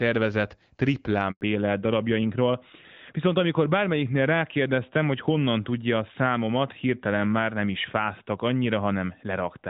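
At 1.31 s the speech cuts out in a handover gap: the call switches networks and no frames arrive for 100 ms, until 1.41 s. The waveform collapses to a flat line, and the spectrogram shows a clean vertical blank band across all frequencies.

From 1.41 s to the end, a fallback to narrowband takes over. The call leaves the AMR wideband codec at 12.65 kbit/s, whose light coding had kept speech clear, and drops to AMR-NB at 12.2 kbit/s. Nothing above 4 kHz survives, so the voice turns duller and rougher. On a spectrogram the energy stops at a hard ceiling near 4 kHz.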